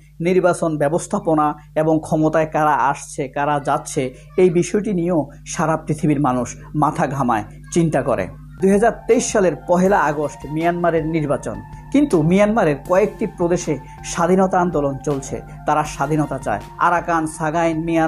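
No technical faults can be heard anywhere in the audio.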